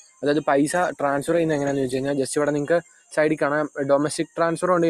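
A noise suppressor built for speech runs over this whole non-speech sound. It mistakes sustained parts for noise and keeps pulling the gain up and down by around 10 dB, so held material pumps and thins while attacks survive. A waveform shows a breathing envelope, and a spectrogram shows tails that cut off early.

From 0.0 to 0.23 s the suppressor cuts the sound itself, dropping it by up to about 16 dB for roughly a fifth of a second. It sounds momentarily hollowed out, and the waveform shows a deep notch in the envelope.

At 0.79 s a call bitrate drop begins and lasts until 2.21 s, bottoming out for 1.33 s. The coarser coding sounds rough and muffled, which fits a fall from about 64 to 18 kbps. On a spectrogram the upper band goes dark, and the sound regains its treble once the rate recovers.

Between 2.82 and 3.17 s the sound is cut by the noise suppressor again, falling as much as about 17 dB over roughly 0.4 s. 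The decay sinks abruptly, and on a spectrogram the energy fades out sooner than the surrounding material would suggest.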